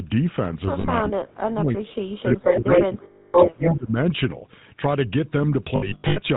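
Throughout, the speech has a buzzy, gravelly roughness and nothing above 4 kHz. This is the GSM full-rate codec, and its damage is plainly audible. The codec rebuilds the voice from a vocal-tract model driven by a sparse pulse train that keeps only every third excitation sample, so the fine texture of the voice is replaced by a coarse buzz. The sound fits the 13 kbps full-rate coder.

At 0.80 s a brief metallic ring lasts about 40 ms in place of the speech. These are lost GSM frames, which fits two 20 ms frames. The decoder filled the gap by repeating the last good frame's settings, so the sound is held rather than dropped.

From 1.03 to 2.02 s the voice dips, thins and breaks up, falling by roughly 30 dB at its deepest. This is speech suppressed in double talk. The likely cause is both sides talking at once, so that the echo canceller could not tell the talker from loudspeaker echo and turned everything down.

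From 2.19 to 3.78 s a delayed copy of the voice trails the original by 191 ms. Its level is roughly 5 dB above that of the speech itself. This is an echo leak, likely from a loudspeaker on one side whose echo canceller let part of the microphone pickup back into the call.

Overlapping that echo, from 2.20 to 3.94 s, the voice is ducked again by up to roughly 25 dB. This is a second stretch of speech suppressed in double talk, likely from the same cause.

Inside it, from 3.04 to 3.35 s, the sound freezes into a metallic ring for 300 ms. These are lost GSM frames again.

From 5.76 to 6.20 s, more lost GSM frames are scattered across about 400 ms, adding 280 ms of lost sound in short rings. The longest run is roughly a tenth of a second.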